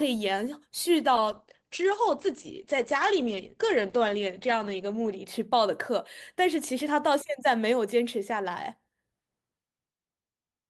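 From 1.17 s to 5.31 s the speech goes through a call bitrate drop. The call's bandwidth estimate fell, so the encoder was forced to spend far fewer bits, which fits a fall from around 40 to 10 kbps, held at its lowest for about 4 s. Coarser coding makes the speech rough and watery, and the audio band narrows from 20 kHz to 8 kHz, muffling it. Unlike packet loss, the sound never breaks up or drops out.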